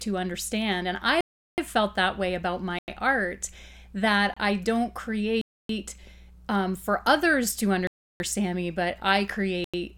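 Blocks of digital silence cut the speech at 1.21–1.58 s (372 ms), 2.79–2.88 s, 4.34–4.37 s, 5.41–5.69 s, 7.87–8.20 s and 9.64–9.74 s. Output buffers went unfilled, likely, fitting 4096- and 16384-sample blocks. Each hole shows as a flat waveform and blank spectrogram column.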